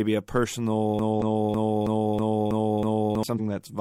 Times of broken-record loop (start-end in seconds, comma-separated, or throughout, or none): 0.99-3.23